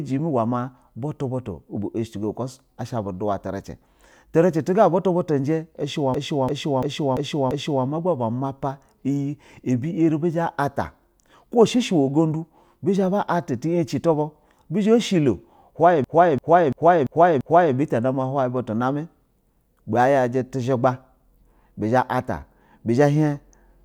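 A system hang loop hits at 6.14 to 7.85 s and 16.04 to 17.75 s. Each time, a 341 ms speech fragment repeats five times, a machine-gun stutter near 2.9 Hz. This fits a frozen system replaying a 16384-sample buffer.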